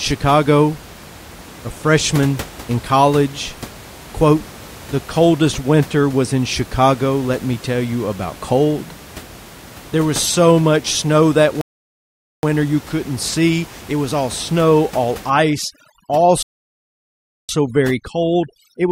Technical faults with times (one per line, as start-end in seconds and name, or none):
11.61-12.43 rebuffering stall
15.30-18.91 overdone noise removal
16.43-17.49 rebuffering stall